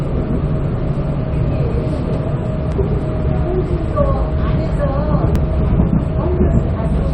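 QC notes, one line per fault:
2.72 s and 5.36 s, dropped buffer (overrun): each is a small jump forward in the sound, with no gap of silence. This is likely an overrun, where incoming samples weren't read before the hardware overwrote them. Roughly 10 ms of audio is lost at each point, and the sound on either side is joined directly. That abrupt splice, with the waveform jumping to a new position, is what produces the skip.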